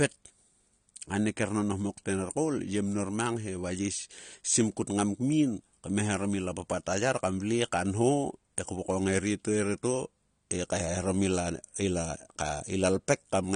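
AAC compression damage runs through the whole of this speech clip, from start to finish, and it is plainly audible. Nothing is present above about 9.7 kHz, so the sound is dull and lacks air. The smeared, watery texture on sustained sounds and sibilants is likely from AAC-LC encoding at a bitrate low enough to fit roughly 32 kbps, where the encoder drops the top band and quantises the remaining spectrum coarsely.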